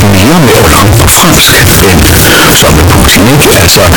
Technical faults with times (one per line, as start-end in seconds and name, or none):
0.00-3.96 float read as integer